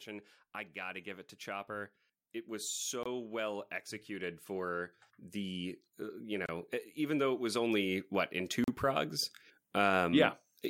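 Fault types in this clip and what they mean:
Automatic gain rising: The automatic gain control judged the incoming level too low and kept turning itself up, not in one step but as a slow ramp from about 0.05 s to 9.18 s, adding about 14 dB in total. Because the boost applies to everything it receives, the voice and the background noise beneath it grow louder together, so the whole recording seems to creep closer and fuller over those nine seconds.
Bluetooth stall: Three brief dropouts are most likely a wireless link briefly starving the headphones' buffer, so playback pauses until delayed data arrives. The first gap begins at 3.03 s and lasts 23 ms, the second at 6.46 s lasts 26 ms, and the third at 8.64 s lasts 39 ms. Each one cuts the sound to sudden silence and then resumes, heard as a tiny hiccup or stutter.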